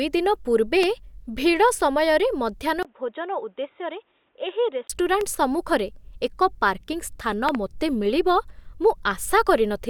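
At 0.83 s, between "ଦିନ ପୂର୍ବେ" and "ଭିଡ଼ ସମୟରେ", a loud pop cuts through the speech, peaking roughly 15 dB above it, while the speech continues underneath. Its likely cause is a voltage spike from a plug, switch or static discharge, which the following circuits shaped into a brief pulse. On a waveform it is a lone vertical spike. On a spectrogram it is a thin bright column spanning every frequency.

From 2.83 s to 4.90 s, just after "ଦିନ ପୂର୍ବେ ଭିଡ଼ ସମୟରେ", the input switched to a poorer device, likely a call-quality headset or secondary microphone. The sound turns dull and boxy, and nothing remains above 3.8 kHz. The spectrogram shows a hard ceiling there and a faint new noise floor about 40 dB down. The waveform shows a 20 ms gap at the switch and a level drop of around 5 dB.

Further loud pops follow, likely from the same kind of electrical glitch. At 5.21 s there is a single pop about 10 dB above the speech. 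Between 7.49 and 7.57 s there is a quick double pop, peaking around 15 dB above it, which shows as paired spikes and twin broadband stripes.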